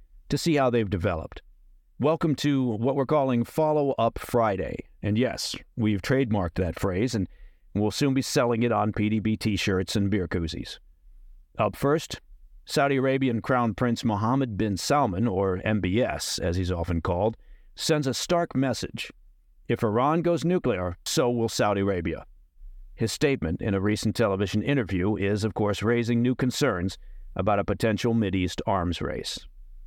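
At 21.06 s, damaged data in a compressed stream: corrupted bytes make the decoder lose frame sync, producing a brief glitch.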